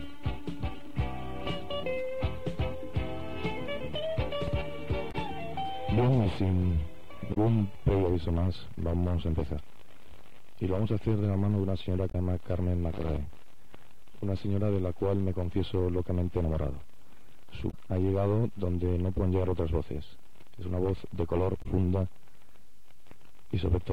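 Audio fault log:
5.08–5.15, 7.30–7.37, 12.08–12.15, 17.67–17.74 and 21.59–21.66 s: damaged data in a compressed stream. Five short bursts, each about 70 ms, where corrupted bytes make the decoder misread frames and lose sync until it finds the next valid header, producing a brief chirp, squawk, click or short hole. On a spectrogram each shows as a narrow vertical smear or gap breaking the surrounding pattern. The waveform shows a short jagged patch or abrupt discontinuity.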